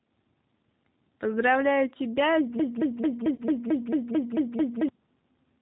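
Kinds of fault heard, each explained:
G.729 codec: throughout the speech, the 8 kbit/s G.729A coder rebuilds each 10 ms frame from a vocal tract model, pitch predictor and a few pulses, so nothing above 4 kHz survives and the voice sounds plainly rough and synthetic.
Broken-record loop: from 2.59 to 4.89 s a 222 ms fragment repeats back to back, ten times over, most likely because the player or stream stalled and kept resending the last piece it held, so the audio meant for that stretch is lost.
VoIP packet loss concealed by the speech codec: at 3.35 to 3.42 s one lost packet, about 30 ms of audio, is filled by the decoder extending its last pitch and filter at falling gain, giving a brief stretched, fading smear within the loop.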